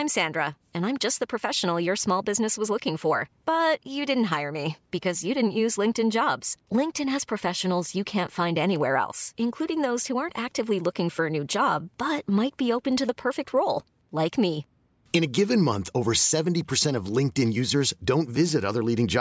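Nothing's technically wrong with this speech recording; it simply carries the usual call microphone processing, with the lowest bass trimmed away and nothing above 8 kHz.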